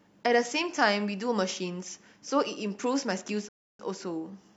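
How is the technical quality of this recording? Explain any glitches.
The speech has one glitch: a rebuffering stall from 3.49 to 3.79 s, where the sound drops to silence for about 0.31 s and then picks up exactly where it stopped. The player ran out of downloaded audio and paused until more arrived, so nothing is lost but the clip runs longer.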